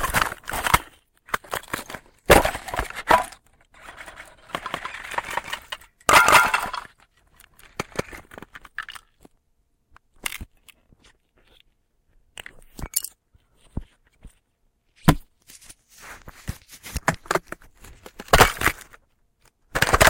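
From about 4.07 s to 8.01 s there's a doubled audio track: everything arrives twice, with a second copy trailing roughly a fifth of a second behind and sitting at about the same level as the original. The copy is full-band, with no decay or room colour, so it reads as a hard slapback rather than an echo, and it cuts in and out abruptly. The likely cause is the same audio being picked up again through a slower path.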